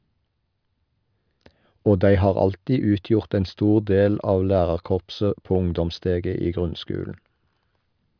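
No technical faults can be heard in this recording.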